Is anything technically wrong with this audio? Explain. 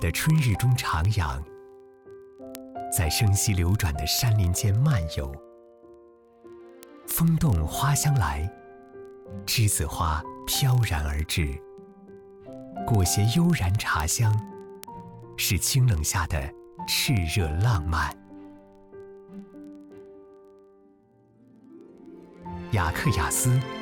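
Yes. From 0.11 s to 23.81 s there are word clock ticks: the receiving device runs on its own clock rather than locking to the sender's, and the two differ by roughly several hundred parts per million. About every 30 ms the clocks slip, and a single sample is dropped or repeated, giving around a thousand sharp ticks of uneven strength at a steady rate. A spectrogram shows evenly spaced thin vertical broadband lines, and the waveform shows tiny one-sample steps.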